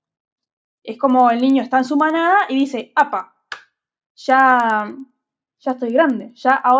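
Regular ticks at 10 Hz run under the speech throughout, present only with signal: the resampler restarted on every 100 ms block converting 48 kHz to 16 kHz.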